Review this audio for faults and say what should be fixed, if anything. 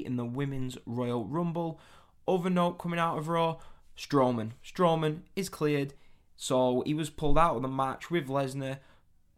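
No faults; nothing needs fixing.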